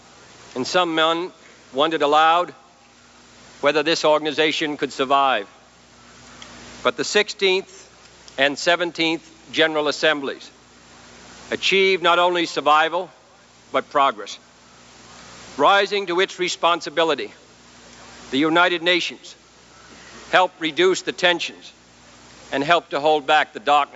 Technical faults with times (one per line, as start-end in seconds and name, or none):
none